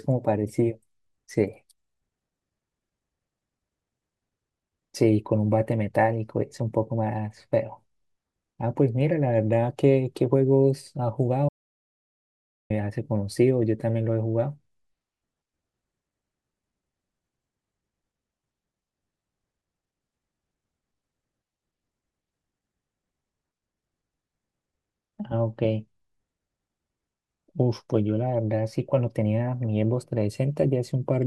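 At 11.49 s the speech drops out to an audio dropout to silence, and it stays dead until 12.70 s, so roughly 1.2 seconds go missing. The gap is silent, with no room tone or hiss underneath, which tells you the recorder kept writing silence while the input vanished. Most likely a cable came loose, a link failed or a mute got tapped. Whatever was said in that stretch is simply gone.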